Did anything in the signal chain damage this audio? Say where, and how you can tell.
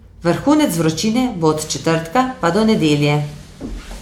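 No, nothing in the signal chain audibly damaged this speech recording. None of the stages between capture and playback leaves any trace a listener can pick out.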